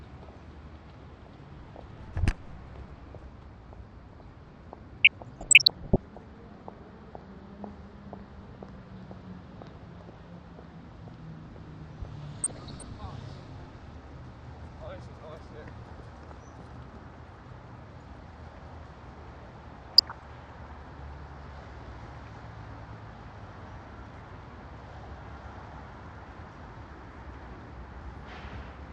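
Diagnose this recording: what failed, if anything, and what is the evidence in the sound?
Codec stage: the audio is dull throughout, with a granular, gurgling texture and flickering upper bands, likely MP2 compression at a low rate, around 80 kbps.

Transmission stage: DAB burbling at 5.04–5.98 s, 12.44–12.82 s and 19.83–20.26 s. Bit errors under 1% corrupt sub-band data, producing short blips of noise in single sub-bands.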